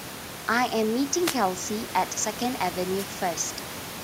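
At 1.17 to 1.39 s and again at 2.97 to 3.06 s, wireless microphone noise hits: the FM radio link fades, and receiver noise rises as a brief swish of static over the speech.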